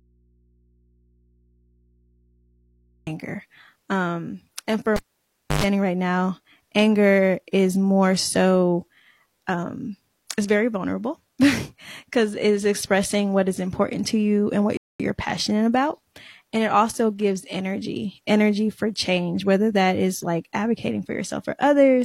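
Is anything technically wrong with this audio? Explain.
Yes, three faults can be heard in this speech clip.

An audio dropout to a faint residue is already under way when the clip starts and lasts until 3.07 s. The signal path was likely broken while the chain after it stayed live, so the gap holds only mains hum about 40 dB below the speech, and then the speech cuts in abruptly.

A cable pulled and plugged in runs from 4.96 to 5.64 s. A live lead is disconnected for about 0.63 s. A pop marks the pull, then near silence follows. A 0.11 s burst of 50 Hz buzz comes while only the tip makes contact, and a second pop marks the sound's return.

A rebuffering stall runs from 14.77 to 15.00 s. The player ran out of buffered audio and waited for more, inserting 0.22 s of silence. The speech then resumes exactly where it stopped, so nothing is lost but the timing is stretched.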